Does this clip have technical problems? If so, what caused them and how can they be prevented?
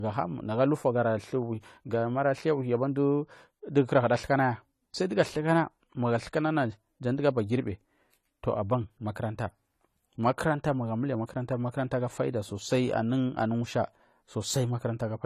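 Yes. Across the whole speech clip, nothing is present above 14.1 kHz. The top end stops abruptly at that point. The speech also keeps the artefacts of an earlier lossy encoding. This is likely low-bitrate audio saved at a high bitrate. The sound points to an AAC encode at around 32 kbit/s that was later re-saved as a 320 kbit/s MP3. The larger file cannot restore what the first encoder discarded. Keep the original lossless source, and encode only once, from that source, at the final bitrate.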